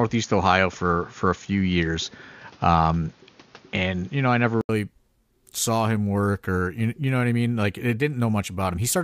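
A speech clip whose first 4.69 s sound dull, with nothing above 6.9 kHz and a faint background noise about 35 dB down. An 80 ms silence then gives way to fuller sound at the same level. This is likely an input switched to a poorer device, not a filter, since the noise changes too.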